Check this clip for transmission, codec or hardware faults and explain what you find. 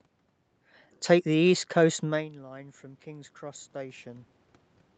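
One fault stands out: automatic gain rising, from 2.0 s to 4.36 s.

Just after 2.0 s the speech drops sharply, about 20 dB quieter, and then the voice and the room noise behind it swell up together, slowly, for more than two seconds, climbing by about 7 dB before settling at 4.36 s. The drop comes from the talker moving away from the microphone around 2 seconds. The call's automatic gain control, finding the input suddenly too quiet, ramped its gain up gradually rather than jumping. Because it amplifies everything the microphone picks up, the background rises in step with the voice.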